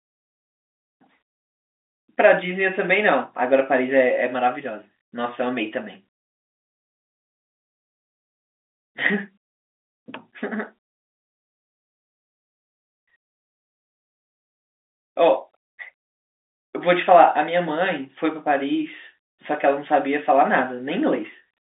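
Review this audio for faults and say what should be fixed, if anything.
Nothing here needs fixing: the speech arrives as ordinary G.711 telephone coding, with the top end stopping around 3.8 kHz just as a phone line does, so there's nothing to chase.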